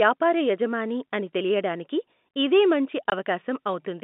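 At 3.1 s the speech drops out for about 20 ms, a case of packet loss filled with silence: one lost packet's worth of audio never arrived, and the receiver played silence in its place. The gap's length fits a single 20 ms packet. It is heard as a brief hole with hard edges. On the waveform it is a flat line; on the spectrogram, a clean vertical blank across the narrow telephone band that tops out near 3.7 kHz.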